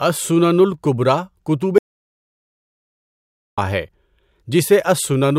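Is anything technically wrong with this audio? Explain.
Yes. From 1.78 s to 3.58 s there is an audio dropout to silence. The input feeding the recorder was likely cut off for that stretch, by a disconnected device, a broken link or an accidental mute, while the recording kept running and filled the gap with silence. The speech stops abruptly mid-flow, leaving about 1.8 s of dead silence with no room tone at all, then resumes just as suddenly. Whatever was said during that gap is lost.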